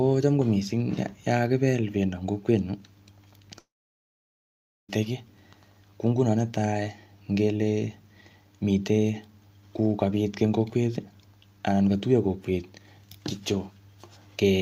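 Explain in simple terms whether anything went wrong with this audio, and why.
The connection most likely stalled in a long network dropout, so about 1.3 seconds of speech never arrived. From 3.59 to 4.90 s the last sound trails off briefly, then there is silence for about 1.2 seconds, and the speech resumes with that part missing.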